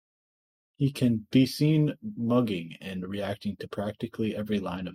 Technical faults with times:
none

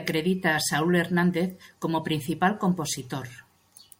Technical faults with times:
none

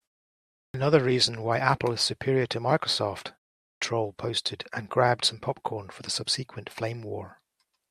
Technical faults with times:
0.63-0.74 clipped start after a pause
3.70-3.82 clipped start after a pause

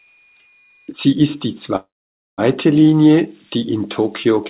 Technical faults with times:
0.00-4.49 converter idle tones
1.76-2.40 call audio freeze

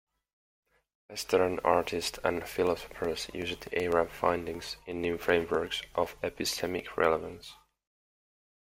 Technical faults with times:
2.42-7.55 periodic USB or driver dropouts

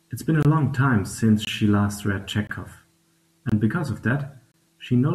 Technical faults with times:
0.43-0.45 gap between chunks
1.45-1.47 gap between chunks
2.47-2.49 gap between chunks
3.49-3.52 gap between chunks
4.52-4.54 gap between chunks

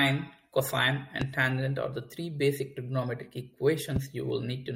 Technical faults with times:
1.21-1.24 loud pop
3.96-3.99 loud pop

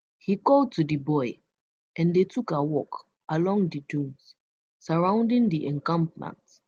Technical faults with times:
none

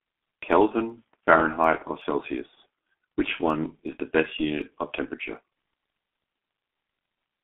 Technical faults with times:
0.00-7.44 G.723.1 codec
0.15-7.23 word clock ticks

